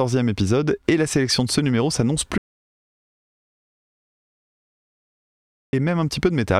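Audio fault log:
2.38–5.73 s, audio dropout to silence: the speech cuts off mid-flow and about 3.35 s of silence follows, with no room tone, before it resumes abruptly. The input was likely lost while recording continued, so silence was written and that stretch is gone.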